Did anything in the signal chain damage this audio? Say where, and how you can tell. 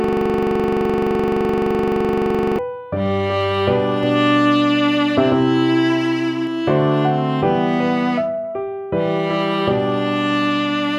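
Yes. From the very start until 2.59 s, the audio is caught in a rapid, rattling buzz: one 42.67 ms slice repeats about 60 times at 23.4 Hz. This is a system hang loop at the driver/buffer stage. The system froze while the hardware replayed a ring buffer, which fits a 2048-sample buffer.

From 4.03 to 6.47 s, a second full-band copy trails the sound by around 150 ms, about 5 dB quieter, dry and switching on and off abruptly. This doubled audio track most likely comes from a slower second capture path or an edit that holds two copies out of step.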